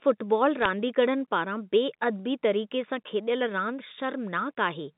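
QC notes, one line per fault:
0.62–0.66 s, bit errors on a digital phone line: a brief cluster of sharp ticks over speech, as flipped bits in the G.711 stream knock single samples far off.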